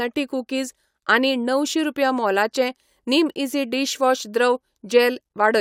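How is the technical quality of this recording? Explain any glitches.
Listening carefully to the speech here, nothing stood out as a glitch or technical problem worth pointing to.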